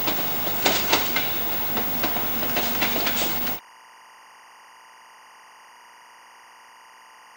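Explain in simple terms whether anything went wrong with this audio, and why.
A timing signal from a nearby track or cable leaked into the recording, a fault called timecode bleed. From 3.23 seconds until the end at 7.37 seconds, a faint, steady chirping warble sits behind the sound, flicking between two high pitches around 1 and 2 kHz.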